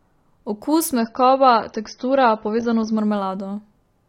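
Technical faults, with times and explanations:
0.98 to 2.98 s, adaptive stream at a lower bitrate: the speech suddenly loses its top end, with nothing above 6.3 kHz, and picks up codec artefacts, then snaps back to full quality just as abruptly. There's no gap either way. The player switched to a lower-bitrate rendition for two seconds, probably because the connection dipped. The dullness and artefacts fit a drop from around 96 kbit/s AAC to something like 24 kbit/s.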